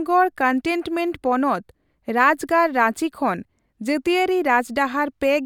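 No technical faults are audible.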